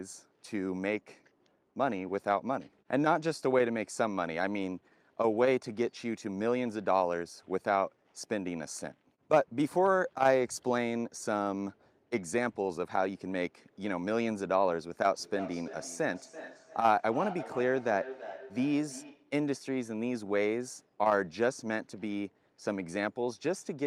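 Two devices on the same call were sharing one room, so one device's loudspeaker played back what the other's microphone had sent, and that microphone picked it up again. Neither echo canceller could remove sound played by the other device. From 15.15 to 19.36 s this feedback echo between two devices sends the speech back round at an interval of roughly 300 ms, each repeat thinner and more ringing, peaking at about 12 dB below the speech.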